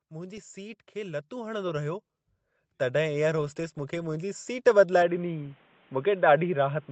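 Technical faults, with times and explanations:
0.08 to 2.1 s, automatic gain rising. The gain control judged the input too quiet and raised it by about 8 dB. Speech and background noise swell together over those two seconds. Nothing above 8 kHz is heard, which fits the call path's band limit.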